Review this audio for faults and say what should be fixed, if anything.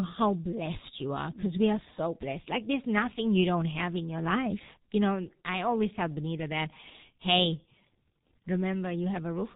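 G.723.1 codec damage runs throughout the speech. Nothing above 4 kHz survives, so the sound is muffled, and the slowly updated voice model, coded in 30 ms frames, leaves a hoarse texture and smeared consonants, consistent with roughly 6 kbit/s. Prevent it by carrying the call on a wideband, higher-bitrate codec instead of G.723.1.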